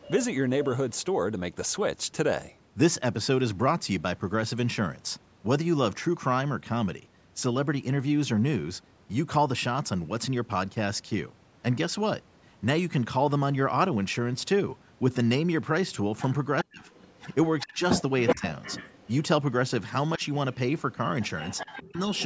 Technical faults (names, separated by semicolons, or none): echo leak; speech suppressed in double talk